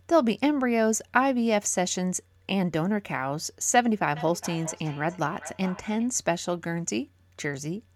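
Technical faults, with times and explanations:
4.16–6.11 s, feedback echo between two devices: a second device's playback re-enters the microphone, where this echo canceller cannot remove it, returning roughly every 0.4 s at up to about 15 dB below the speech.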